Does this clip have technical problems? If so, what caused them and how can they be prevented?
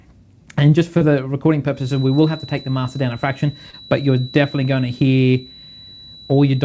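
Yes. At 0.98 s and again at 3.71 s there is a brief smear lasting a few hundredths of a second: short concealed packet loss. Roughly 30 ms of audio arrived too late each time, so the receiver stretched the preceding sound to bridge the gap. A steadier network connection, or a larger jitter buffer, would prevent this.

From 1.70 s to the end, a thin, steady tone at 3.9 kHz sits well below the main sound and swells and fades slowly in level. This is likely a feedback whistle, with the loudspeaker-to-microphone loop held just short of runaway. Using headphones, lowering speaker volume, or enabling echo cancellation would prevent it.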